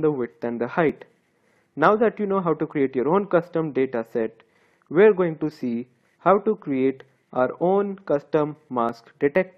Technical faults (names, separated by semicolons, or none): overlap between stream segments